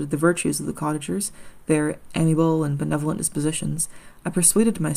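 No technical faults are audible anywhere in the recording.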